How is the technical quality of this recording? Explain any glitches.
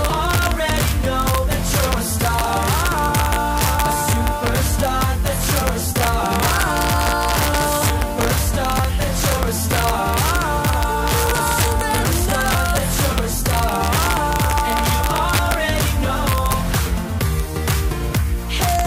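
Sharp cracks land on the loudest peaks throughout the recording, which points to integer overflow. With the signal driven about 2 dB past the integer limit, the small fraction of samples that exceed it wrap to the opposite sign instead of being limited, producing cracks much sharper than ordinary clipping.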